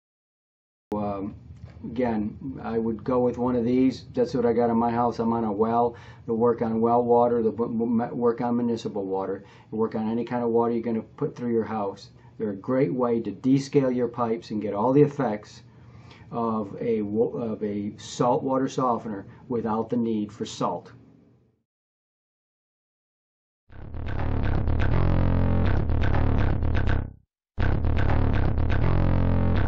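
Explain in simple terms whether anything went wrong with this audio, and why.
Something went wrong at the very beginning: a cut-off start. Nothing plays until 0.92 s, then sound begins abruptly mid-way, with no natural build-up, because the recording started late.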